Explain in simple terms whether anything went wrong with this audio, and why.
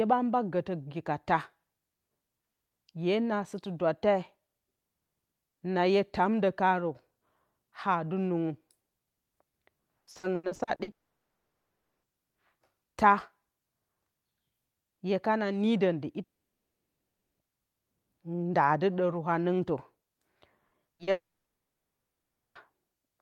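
Repeated packet loss (robotic sound) runs from 9.99 to 10.90 s. Pieces of the speech kept failing to arrive in time, nine times in under a second, with the longest hole lasting 80 ms. Each time, the receiver papered over the hole by stretching out the last bit of sound it had. Roughly half of that stretch is patched-in guesswork, so it comes out choppy and mechanical, with bits of the speech gone.

A long network dropout follows at 10.91 to 12.06 s. Two more occur at 16.23 to 17.42 s, right after "hye kano nidon dɨ", and at 21.11 to 22.58 s. In each, the audio simply stops for about 1.1 s, 1.2 s and 1.4 s respectively, and is almost entirely silent. The likely cause is the connection cutting out, so nothing reached the listener. When the sound returns, whatever was said during the gap is lost for good.

Short concealed packet loss appears just before the last dropout, at 20.67 to 20.74 s, 20.95 to 21.02 s and 21.03 to 21.10 s. 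Each time, about 40 ms of audio went missing. The receiver filled the hole by continuing the previous sound, then blended back into the real audio. These are heard as quick smears or wobbles, and a short sound may drop out entirely.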